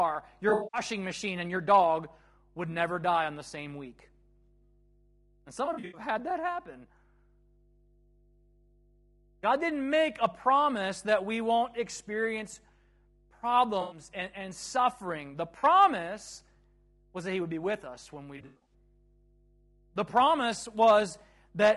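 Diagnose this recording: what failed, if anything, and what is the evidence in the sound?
There's a steady 50 Hz mains hum under the whole clip, sitting about 35 dB below the speech. That points to the analogue wiring side: a ground loop or a transformer close to the cabling is leaking the power line into the signal before it was ever digitised. Since it's constant and locked to 50 Hz, it's coupled interference, not anything the digital chain did. The 50 Hz figure points to a 50 Hz mains region.

The codec damage is plainly audible all the way through: the speech has a coded, degraded character rather than a clean one. The likely culprit is low-delay AAC compression, specifically AAC-ELD, the kind used in video calls, at a rate that fits around 32 kbps. That codec trades quality for very short frames and a low-delay window. It codes a limited set of frequency lines per frame, and at tight rates the detail it drops is what you're hearing.

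On top of that, the network dropped packets, and you get AAC frame loss with concealment in five places. The first is at 0.49 to 0.81 s, just before "machine and your dog", with about 200 ms missing across a 240 ms stretch. Next is 5.65 to 6.01 s, before "had that happen", about 180 ms lost over 280 ms. Then 13.81 to 13.99 s, before "and and suffering", 100 ms. After that, 15.59 to 15.65 s, 40 ms. The last is 18.37 to 18.74 s, about 200 ms lost over 280 ms. The decoder patches each gap from the last good spectrum, so those spots come out smeared, noisy or phasey, not silent.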